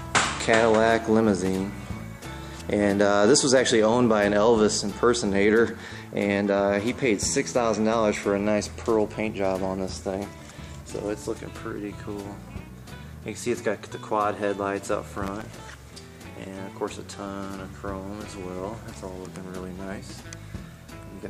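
Processor overload crackle hits at 1.37–1.48 s and again, longer, at 15.18–15.84 s: missed sub-millisecond buffers replay stale audio, giving a gritty tearing burst.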